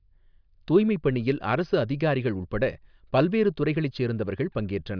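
No technical faults can be heard anywhere in this speech recording.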